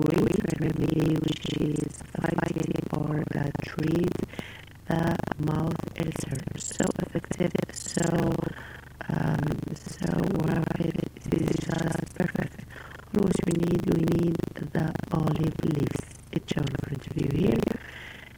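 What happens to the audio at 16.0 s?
A robotic 25 Hz rattle runs through it, as across the whole clip. This is buffer tearing: roughly a third of each 40 ms buffer replays audio about 150 ms old.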